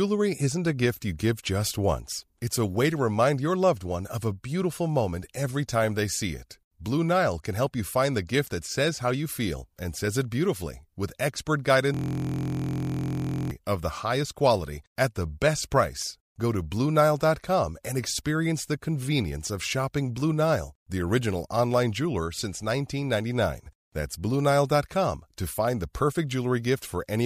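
Between 11.94 and 13.51 s, the playback system hangs while the audio hardware keeps cycling through the same ring buffer. The result is a system hang loop in this speech recording. A single 23.22 ms slice of audio repeats exactly, dozens of times over, which fits a 1024-sample buffer. Because the looped piece is so short, the speech gives way to a steady, mechanical buzz at the 43.1 Hz repeat rate until normal playback resumes.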